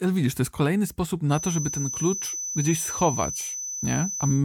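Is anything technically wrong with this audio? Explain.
Yes. From 1.27 s to the end, a feedback whistle sits at 6 kHz, about 10 dB below the speech: a thin, steady tone swelling and fading slowly in level. It is likely a loudspeaker-to-microphone loop held at the edge of feedback, sustaining one frequency without running away.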